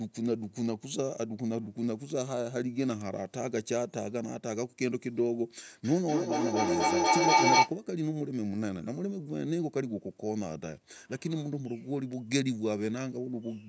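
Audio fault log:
5.84–7.75 s feedback howl: a tone near 1 kHz swells, pulsing about every 200 ms, to about 8 dB above speech, as a microphone-loudspeaker loop gains level each trip.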